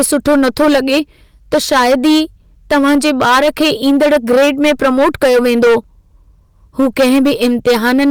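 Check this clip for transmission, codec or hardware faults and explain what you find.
One fault is present, running through the whole speech clip: hard clipping. The signal reaches a stage about 14 dB hotter than it can pass, so roughly a sixth of all samples are sliced flat at the ceiling. Those squared-off peaks spray high harmonics, giving every loud syllable a harsh, buzzy fuzz.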